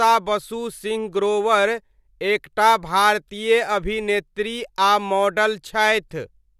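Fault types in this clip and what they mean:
No technical faults detected.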